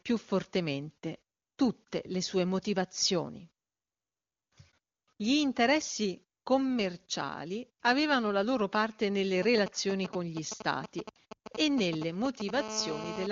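From 9.43 to 12.51 s, GSM signalling bursts break into the speech: a galloping dit-dit-dit of short buzzes repeating at 217 Hz, sitting around 10 dB below the speech. A 2G handset nearby is exchanging brief groups of radio bursts with the network, as happens before a call or text comes in, and the audio circuitry rectifies each radio pulse into an audible click train at the frame rate.

At 12.55 s the pattern changes to a GSM phone buzz that runs to 13.27 s, about 9 dB below the speech. It is a hard, raspy 217 Hz tone rich in harmonics, bearing no relation to the speech underneath. The phone has moved into an active call and now transmits a burst in every frame, so the rectified interference becomes a continuous buzz rather than the earlier grouped bursts. The speech band carries the clean wideband character of the AMR-WB (HD Voice) codec, which fits its top 23.85 kbit/s mode.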